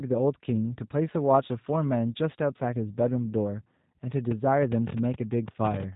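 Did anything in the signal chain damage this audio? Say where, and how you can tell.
Yes, at the codec stage. Throughout the speech there is a hard ceiling at about 3.8 kHz, and the sound is rough, buzzy and faintly synthetic, the signature of the G.729 codec at a rate that points to 8 kbit/s. G.729 discards the waveform and rebuilds each 10 ms frame from a vocal tract filter, a pitch predictor and a few pulses. A spectrogram shows an empty band above 3.8 kHz and smeared, blocky harmonics.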